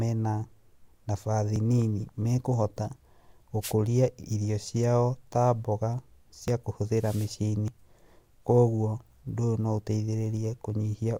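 At 1.56 s the speech jumps forward. About 40 ms of sound is missing, with no gap of silence. This is likely a dropped buffer (overrun). The program was too slow to read its samples, so the hardware overwrote them. The two sides of the loss are joined directly.

From 3.61 to 3.74 s a short swish of static is heard. This is a wireless microphone noise hit. The FM radio signal fades as reflections cancel. Receiver noise rises into a brief burst.

Right after "ciao ta mboga", at 6.48 s, another skip occurs. Again about 40 ms is lost.

From 6.94 to 7.35 s a longer noise hit follows. The static lasts about 0.4 s, as the fade holds longer.

At 7.68 s a third skip occurs, likely another dropped buffer. This jump is larger, about 70 ms, so more of the speech is cut away.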